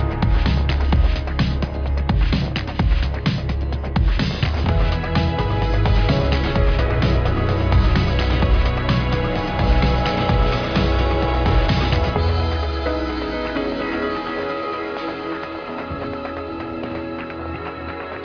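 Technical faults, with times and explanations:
Nothing technical stands out here; the audio runs along without a single glitch worth flagging.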